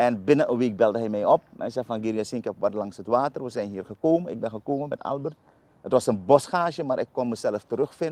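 Nothing stood out on listening to the audio.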